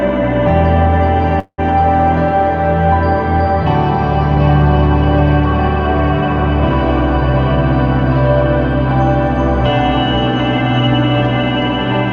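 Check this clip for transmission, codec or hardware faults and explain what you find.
One fault stands out, a call audio freeze from 1.39 to 1.60 s, against a call path whose top end stops around 8 kHz, as expected for Opus at this setting.

The likely cause is packets stalling in transit until the jitter buffer ran dry. The receiver stretched the last sound into a fading buzz or hiss, which drops to silence for about 70 ms. When delivery resumes, the audio carries on where it left off with nothing lost. The stall inserts a gap of about 186 ms, and everything after it runs that much later.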